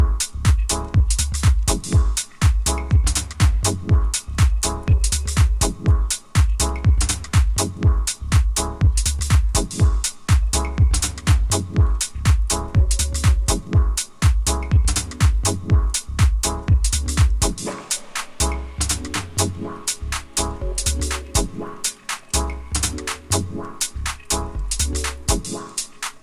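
No technical faults are audible.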